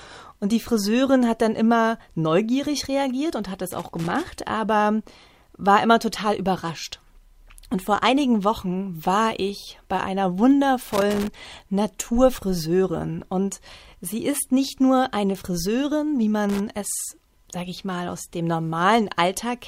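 Loose connector crackle hits at 3.66 to 4.26 s, 10.92 to 11.28 s and 16.49 to 16.60 s: a dodgy contact chopping the speech into scratchy, irregular bursts.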